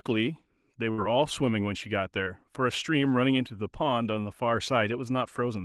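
At 0.91 to 1.00 s there is a burst of packet loss. About 60 ms of speech never arrived in time, so the receiver extended the last sound for roughly 63 ms, letting it sag in level before the real audio returned further along, with that stretch absent. What separates it from a brief concealment is its length: the fill lasts long enough to be heard as a held, fading continuation rather than a quick blip, followed by a jump.

At 2.24 to 2.28 s comes a short concealed packet loss. Only about 20 ms went missing, and the receiver patched roughly 21 ms by carrying the preceding sound forward, then crossfaded back into the genuine signal. Because the patch is so short, it registers as a momentary smear or wobble rather than a sustained buzz or hiss with a skip. Any brief consonant there may be lost. Throughout, the Opus call path leaves its coding texture, with a bandwidth limit near 12 kHz consistent with a low bitrate around 20 kbps.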